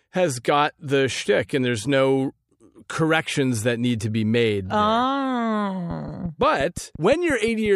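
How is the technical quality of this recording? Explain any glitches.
There's one real glitch here, a train of clicks near the end. From 5.91 to 7.67 s a steady ticking sits over the speech, about 5.7 clicks a second, roughly ten in all, each peaking at about the speech's own level. Evenly spaced, same-shaped pulses like that most likely come from interference from nearby gear or a faulty connection or power supply.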